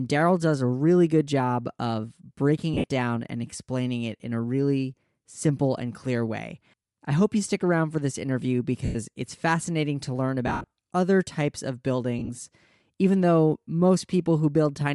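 Bluetooth LC3 compression runs throughout this speech recording: the voice has a breathy, grainy edge where the upper spectrum is thinned and noise-filled, likely from LC3 coding at a rate around 48 kbps. Lost LE Audio frames break in four times: 2.74–2.84 s between "good job of breaking" and "down and explaining it" (about 90 ms scattered over 100 ms), 8.85–8.96 s between "around for this interview" and "it's fascinating to learn" (100 ms), 10.47–10.67 s (170 ms over 240 ms), and 12.19–12.30 s after "other types of" (60 ms). At each point the decoder replays the last spectrum with randomised signs, so the voice smears into a brief noisy hiss.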